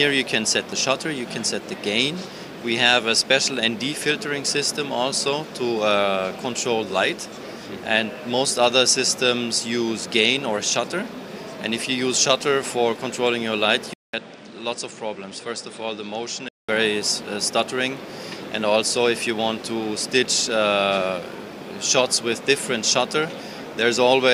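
At 13.94 s a gap of about 200 ms opens. After it, and until 16.69 s, the sound turns duller and boxy. Nothing comes through above 9.8 kHz, the level drops by roughly 5 dB, and a new noise floor sits far below the signal. This is most likely the input switched to a poorer device. On a spectrogram the energy ends in a hard shelf at 9.8 kHz after a short blank column. The waveform shows a brief flat gap and then a smaller envelope.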